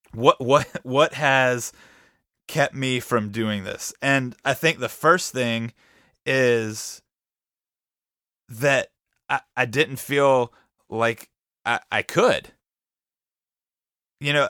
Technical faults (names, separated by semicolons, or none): block of digital silence